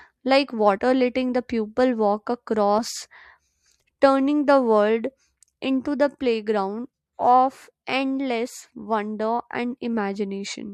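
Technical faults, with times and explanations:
0.77 s, compressed frames skipped: just before "letting the pupil walk", about two frames of the coded stream never reach the output, so the sound leaps ahead by around 40 ms.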